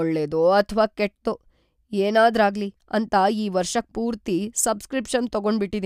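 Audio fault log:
No faults heard anywhere in this speech recording.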